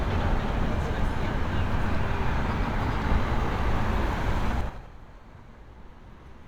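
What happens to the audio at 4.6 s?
Zipper noise runs from 4.52 to 4.86 s: the level falls by roughly 20 dB in unsmoothed 5 dB jumps, about ten per second, each leaving a small click, so the sound ticks as it drops. The waveform shows a staircase envelope, and the spectrogram shows faint vertical broadband lines at each step.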